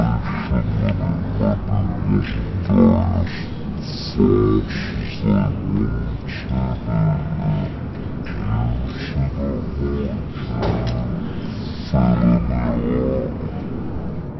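Wrong sample rate throughout the audio: it plays at 0.363 times normal speed and 17.6 semitones low, which fits 44.1 kHz material played back at 16 kHz without conversion.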